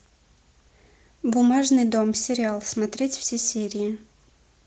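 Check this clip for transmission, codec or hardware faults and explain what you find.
Nothing faulty found: the speech runs through Opus voice compression in hybrid mode at 20 kbps with its super-wideband range kept, and the light coding texture at that rate is normal behaviour, not a defect.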